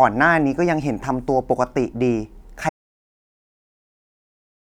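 An audio dropout to silence begins at 2.69 s and runs to the end of this short speech recording, about 2.0 s in all. The speech cuts off abruptly mid-flow and is replaced by silence, with no room tone or background hiss left. The likely cause is a lost input, such as a disconnected device, a failed link or an accidental mute, while the recorder kept writing zeros. Whatever was said after the cut is unrecoverable.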